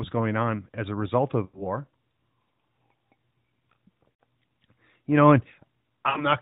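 At 1.46–1.67 s, 4.12–4.21 s and 6.10–6.26 s, lost AMR speech frames make the speech smear into a drawn-out sound that fades away, as the decoder repeats its last good settings at falling gain. Spectrograms show frozen, fading harmonics, and the waveform tapers smoothly.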